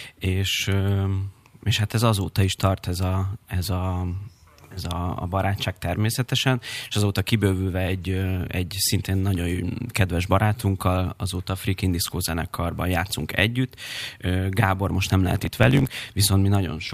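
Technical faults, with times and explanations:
15.25–16.01 s, block size mismatch (truncated): after "most nem", block ends are dropped, causing a 50 Hz buzz and speech running 1.07 times fast with its timbre kept.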